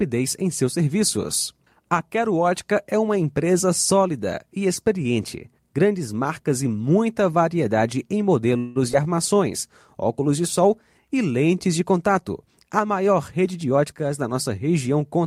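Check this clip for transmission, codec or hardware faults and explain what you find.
Yes, there's a cluster of network-side trouble in this speech, plus a later speed-up.

From 8.57 to 8.77 s you get a call audio freeze: a fading buzz fills about 181 ms. The likely cause is stalled packets draining the jitter buffer. Speech then resumes where it stopped, with nothing lost.

At 8.92 to 8.95 s there's short concealed packet loss. About 40 ms never arrived, and the receiver smeared over the gap, so you hear a brief wobble.

Between 9.04 and 9.36 s a jitter buffer slow-down repeats pitch periods, adding 40 ms. The speech plays at 90% speed with unchanged pitch and sounds drawn out.

Between 12.69 and 14.05 s a jitter buffer speed-up trims pitch periods, dropping around a fifth of a second. The speech runs at 113% and sounds hurried at the same pitch.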